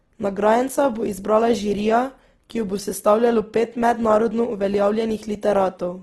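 Throughout, the speech sounds grainy and rough, with nothing above 12.2 kHz, likely Opus compression at a low bitrate near 16 kbps filling bands with noise, not MP3-style swirling.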